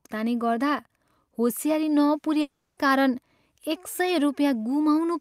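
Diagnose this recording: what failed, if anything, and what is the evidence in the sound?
Network stage: from 2.41 to 2.79 s the speech turns into a fading buzz that fills the whole gap, likely a long network dropout the receiver concealed.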